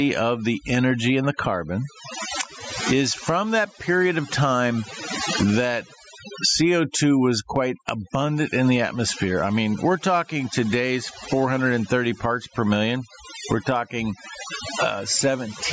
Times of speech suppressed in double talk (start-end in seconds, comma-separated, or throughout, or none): none